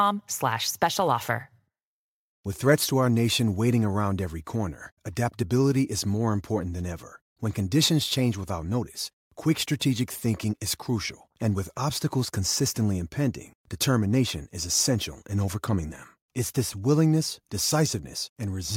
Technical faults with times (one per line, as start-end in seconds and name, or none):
none